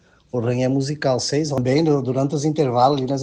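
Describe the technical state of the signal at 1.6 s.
At 1.58 s there is a brief instance of damaged data in a compressed stream, a single momentary event rather than a sustained fault. A short run of the encoded bitstream at that point is corrupt, so the decoder cannot interpret the affected frame correctly, loses frame synchronisation and has to hunt for the next valid header before output resumes. Audibly this registers as a short chirp, squawk or blip.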